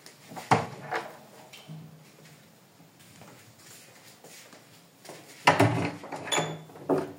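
Nothing here trips any alarm; the sound just runs along from its first moment to its last without a single technical hiccup worth pointing to.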